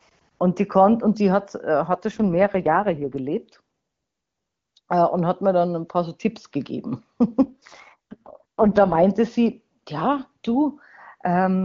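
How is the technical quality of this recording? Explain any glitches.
The speech carries two AMR rate drops, at 2.11 to 3.18 s and again at 7.44 to 9.04 s. Outside them the AMR-WB (HD Voice) coding sounds like its top 23.85 kbit/s mode. In each span the network apparently told the codec to cut its rate and spend bits on error protection. The voice turns rough, buzzy and synthetic, which fits the lowest 6.6 kbit/s mode, then clears. A spectrogram keeps the same bandwidth with no gap, just smeared harmonics and noisier highs. The waveform stays continuous.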